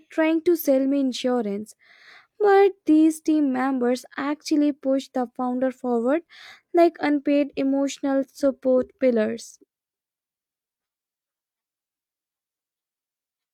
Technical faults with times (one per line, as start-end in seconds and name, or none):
none